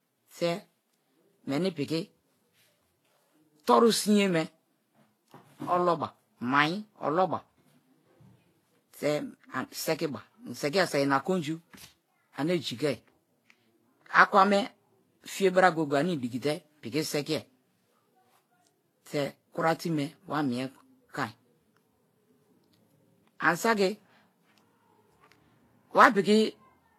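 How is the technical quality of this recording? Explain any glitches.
The quality is compromised by stacked compression, audible throughout all the speech. The fault is transcoding between lossy codecs: the sound carries several layers of codec artefacts at once, the different artefacts heard together, and nothing above 18.2 kHz. The likely cause is a chain where each encoder spent its bits re-coding the previous one's damage. The mix points to a low-rate Vorbis pass around 33 kbit/s, then WMA near 96 kbit/s, and finally HE-AAC around 40 kbit/s.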